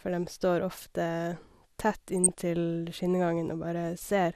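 MP2 compression, throughout: the speech is dull and gurgling as upper sub-bands drop out, likely from Layer II coding at a low rate near 80 kbps.

DAB burbling, 2.17 to 2.29 s: a small number of bit errors slip past error correction, putting short blips of noise into single sub-bands across six frames.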